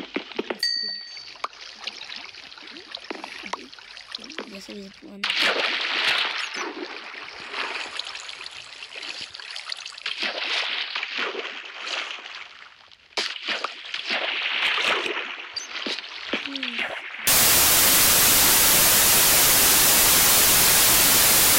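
From 17.27 s to the end, the samples are built from the wrong bytes: the reader misaligns or swaps each sample's bytes, so the rapidly varying low bits become the dominant part of every value. The audio turns abruptly into loud, harsh broadband noise until the clip ends.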